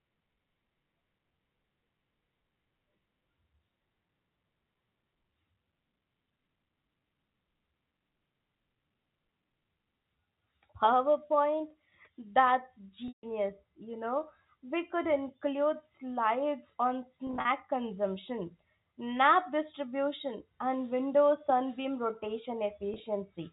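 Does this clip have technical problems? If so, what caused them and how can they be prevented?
Yes. There is packet loss with pitch repetition at 13.08 s (before "you know"), 17.27 s and 22.94 s. The receiver loops the last pitch period, which sounds buzzy and shows as identical repeated waveform cycles. Forward error correction and a deeper jitter buffer prevent it.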